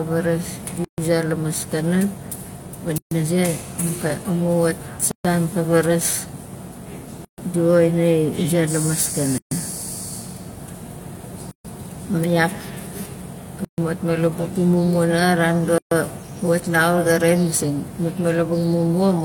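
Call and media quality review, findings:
Gap at a join of encoded pieces: 133 ms silences in continuous speech at 0.85, 2.98, 5.11, 7.25, 9.38, 11.51, 13.65 and 15.78 s, recurring every 2.0 s. Edges are smeared, and the speech resumes where it stopped. The probable component is the segment encode-and-concatenate stage, joining roughly 2 s pieces without trimming each piece's encoder start delay and last-frame padding.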